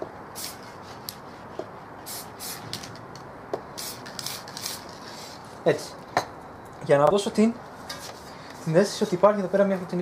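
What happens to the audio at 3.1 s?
Nothing goes wrong at 3.1 s; the audio plays through that moment intact, with no dropout, click, glitch or other audible fault.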